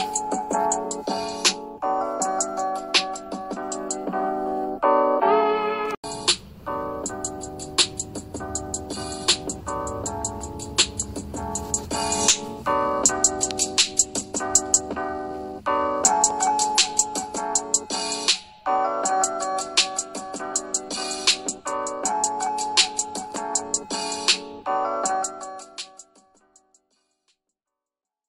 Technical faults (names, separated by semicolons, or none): none